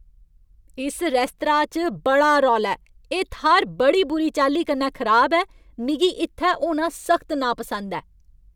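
Speech recording, with no audible technical faults anywhere.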